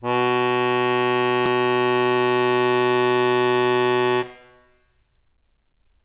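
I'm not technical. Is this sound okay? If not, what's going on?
No. There's a skip ahead at about 1.46 seconds: the music suddenly jumps forward, losing roughly seven-tenths of a second. On a call, sound travels in small chunks and waits briefly in a holding area before playing. Here a batch of chunks was thrown away, either lost on the way or dropped when that holding area overfilled, so playback leapt to newer sound and stitched the two sides together with no pause. The music is also muffled throughout, because the call line carries nothing above 4 kHz.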